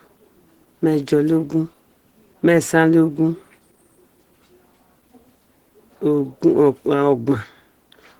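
Right through the clip the speech has a muffled, hoarse, grainy quality with plainly audible damage, though the band still reaches about 20 kHz. That's likely Opus compression in its hybrid speech mode, with a rough, noisy texture that fits a low rate near 16 kbps.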